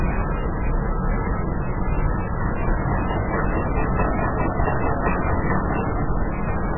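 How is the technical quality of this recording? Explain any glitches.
Technical quality is poor. Throughout, the audio stops dead above 2.9 kHz and sounds watery and swirly, with heavy damage. The likely cause is MP3 compression at a very low bitrate, fitting about 8 kbps. Starved of bits, the encoder cuts the treble and flickers weak frequencies on and off.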